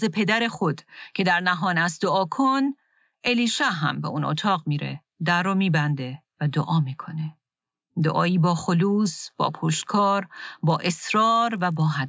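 From 10.7 s to the end at 12.09 s, a 50 Hz buzz rides on the speech, sounding only while signal is present. It comes from a resampler restarted on every block. Each 20 ms block, likely converted from 24 kHz to 16 kHz, was handled separately, leaving a small error at every edge.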